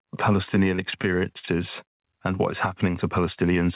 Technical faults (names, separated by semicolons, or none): gain pumping; repeated packet loss (robotic sound)